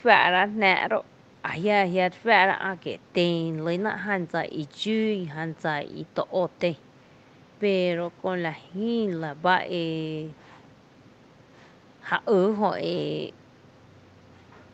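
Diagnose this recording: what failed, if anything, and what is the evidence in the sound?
Nothing in this speech recording points to a failure at any stage of the chain. It sounds like it passed through a call path, with the top end stopping around 12 kHz as a call codec would leave it, and the room's background noise sitting about 28 dB below the speech.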